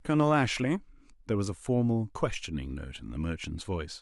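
A brief blip of noise at 2.96 s is DAB burbling: weak reception let bit errors past error correction, briefly corrupting individual MP2 sub-bands.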